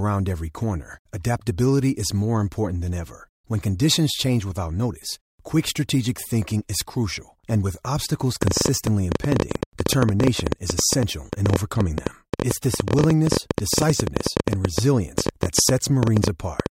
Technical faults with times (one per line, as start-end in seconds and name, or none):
8.43-16.67 train of clicks